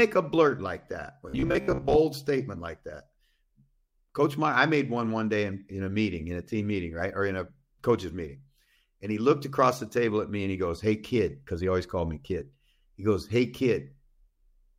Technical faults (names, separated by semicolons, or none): robotic sound from repeated short buffers